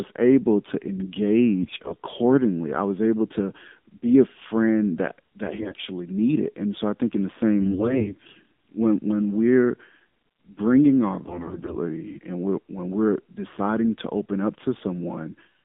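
The speech was carried through the AMR narrowband mobile codec at a low rate that sounds consistent with the 7.4 kbps mode. Only about 200 Hz to 3.6 kHz survives, so the voice sounds muffled, thin, plainly buzzy and synthetic. On top of this come AMR bit errors, where flipped low-priority bits (around one in ten, about 7% in the third burst) misplace the excitation pulses and skew fine pitch and gain. This turns the voice hoarse and gargly from 1.63 to 1.95 s, from 5.46 to 5.79 s after "be a friend that", from 7.60 to 8.42 s between "I think in the" and "when when we're", and from 11.24 to 11.76 s between "bringing our" and "and we're when we're".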